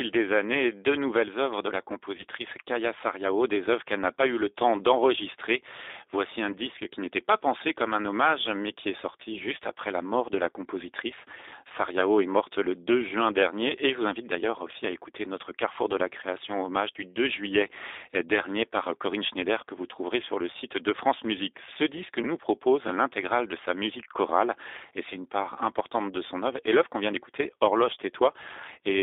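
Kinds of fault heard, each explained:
G.729 codec: This 8 kbit/s speech codec rebuilds the voice from a vocal-tract filter, a pitch predictor and a few pulses per frame, so the speech throughout sounds plainly rough and slightly synthetic. The line band runs from 300 Hz to about 3.7 kHz. On a spectrogram, energy stops sharply near 3.7 kHz with little below 300 Hz, and the harmonics look smeared rather than crisp.
VoIP packet loss concealed by the speech codec: Where packets went missing, the decoder extended the last pitch and filter at falling gain, leaving brief buzzy, blurred patches. These fall at 2.17–2.24 s just after "nouvelles œuvres de la", at 12.01–12.03 s just before "est morte le", and at 14.91–14.95 s just after "invite d'ailleurs aussi à". The gaps fit one or two 10 ms frames. The waveform shows a short, smooth, over-regular stretch, and the spectrogram shows steady harmonics instead of natural movement.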